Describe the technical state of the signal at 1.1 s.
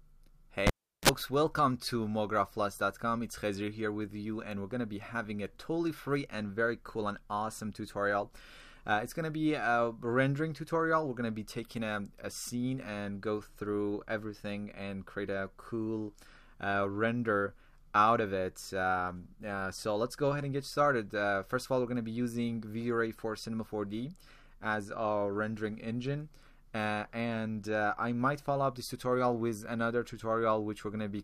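Right at 1.1 s the audio is just coming back from a cable pulled and plugged in, spanning 0.67 to 1.09 s. A pop, roughly 371 ms of near silence, then a 36 ms burst of 60 Hz mains buzz as the tip touches, and a final reconnect pop.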